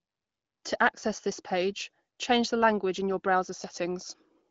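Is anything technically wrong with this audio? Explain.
No, nothing's wrong here: it's speech carried over the AMR wideband (HD Voice) codec at a comfortable 15.85 kbit/s, so the codec leaves only light coding damage and the usual ceiling, with nothing above about 7.5 kHz.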